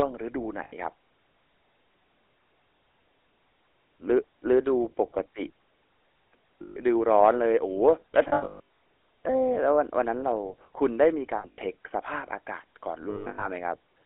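Throughout, the speech runs through the GSM full-rate codec at 13 kbps, which rebuilds the voice from a vocal-tract model driven by sparse regular pulses, inside a 300 to 3400 Hz line band. The result is a plainly audible buzzy, gravelly roughness and a dull, narrow top end.

Lost GSM frames occur at 0.64 to 0.73 s, 6.62 to 6.78 s, 8.28 to 8.60 s, 11.38 to 11.59 s and 13.1 to 13.47 s. Missing frames were filled by repeating the last good one, so the sound hangs as a rough metallic ring. The later three are broken patches, with runs of up to about 150 ms.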